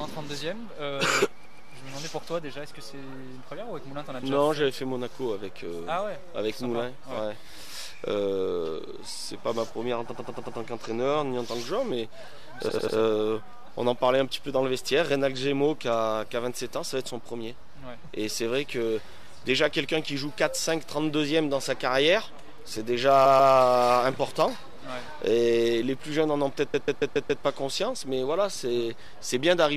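Repeated frames cause stutters at 1.44, 10.10, 12.68, 23.25 and 26.73 s. Compressed blocks of 139 or 93 ms were sent again, replaying two to five times and lengthening the sound.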